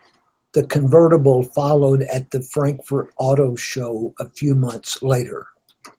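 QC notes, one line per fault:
No faults found in this speech clip; Opus voice coding, here in hybrid mode at fullband, is running as intended.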